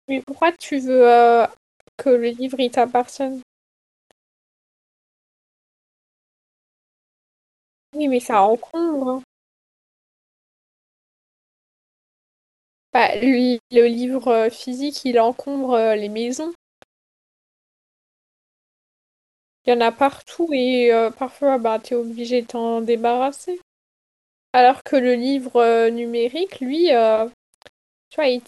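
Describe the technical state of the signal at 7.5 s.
At 7.5 s the speech carries a grainy, rough distortion that tracks the voice, sitting roughly 40 dB below it and turning quiet passages gritty. It runs through the whole recording, not just this moment. The likely cause is low bit depth without dither: samples rounded to very few levels, consistent with 8-bit, so the error follows the signal.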